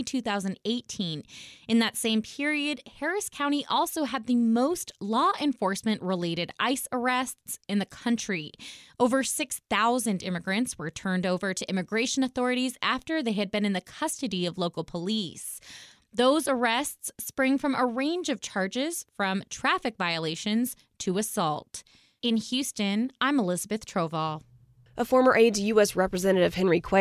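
No technical faults can be heard anywhere in the recording.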